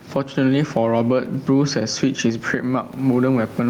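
Gain pumping runs through the whole clip. The input gain is likely set far too high for the microphone, so a fast limiter or compressor clamps down each time the speech gets loud and lets go in the pauses, with the level swinging by roughly 15 dB. The room noise sits about 35 dB below the speech. Loud and quiet passages sit unnaturally close together, and the delivery sounds squashed and breathing.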